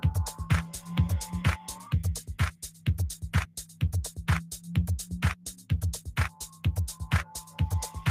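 Across the whole clip, a noise suppressor built for speech is working on sound it was never meant for. Treating steady tones, ambience and decay as noise, it keeps pulling the level down and letting it back up, with the gain swinging by roughly 15 dB. Onsets pass largely intact, but whatever sustains afterwards is pushed down, so the texture rises and falls with the suppressor rather than with the sound itself.

Sound cut by the noise suppressor occurs at 1.58 to 1.88 s (about 8 dB), 2.51 to 2.87 s (about 13 dB), 3.46 to 3.82 s (about 13 dB), 4.42 to 4.70 s (about 11 dB), 5.35 to 5.71 s (about 13 dB), 6.29 to 6.65 s (about 13 dB) and 7.24 to 7.59 s (about 11 dB). Each time, roughly a third of a second of held or fading sound, about 0.4 s at 5.35 s, is classed as noise and sinks well below its surroundings.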